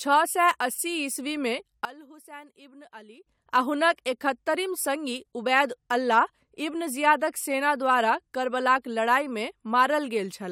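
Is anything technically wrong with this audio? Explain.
Yes. From 1.85 to 3.27 s the speech falls about 19 dB, likely one channel inverted: the shared centre cancels in mono.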